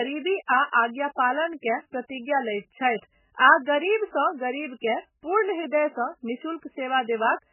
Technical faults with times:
0.00-7.53 MP3 compression

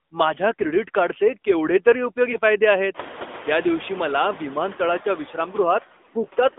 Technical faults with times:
0.00-6.58 noise suppressor artifacts
0.00-6.58 AMR narrowband mobile codec
2.32-2.37 lost AMR speech frames

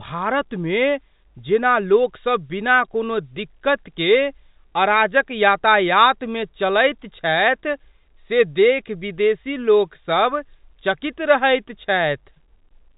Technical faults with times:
none

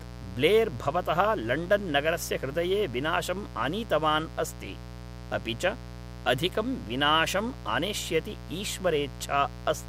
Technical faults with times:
0.00-9.88 mains buzz

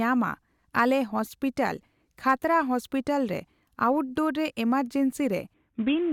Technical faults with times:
5.54-6.13 Bluetooth SBC bit pool drop

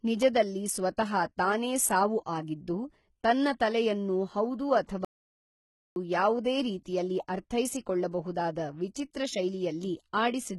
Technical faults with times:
0.00-10.58 HE-AAC compression
0.97 pre-echo
4.86-4.89 pre-echo
5.05-5.96 playback stall

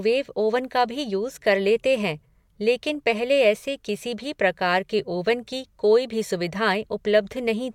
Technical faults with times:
none

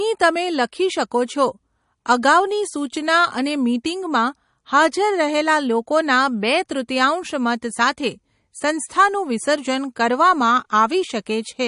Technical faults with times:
0.00-11.67 MP3 compression

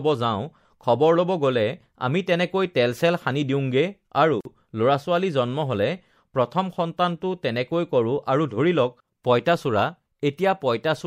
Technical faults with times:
4.41-4.45 gap at a join of encoded pieces

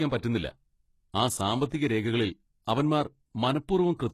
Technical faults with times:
0.00-4.14 HE-AAC compression

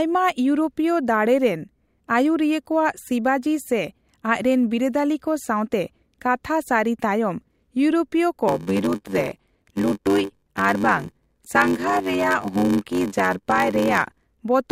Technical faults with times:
8.47-14.26 block size mismatch (padded)

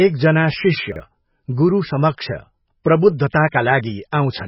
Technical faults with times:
0.00-4.48 MP3 compression
0.92-1.00 chunks out of order
4.11 pre-echo

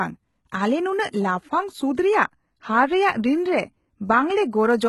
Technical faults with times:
0.00-4.89 HE-AAC compression

